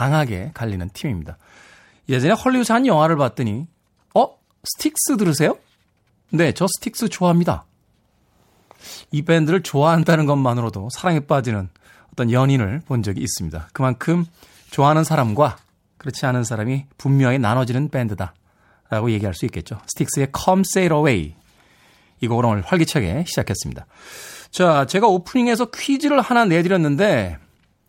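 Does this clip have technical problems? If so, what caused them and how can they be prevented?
No, this clip has no technical problems, so there is nothing to trace back or prevent.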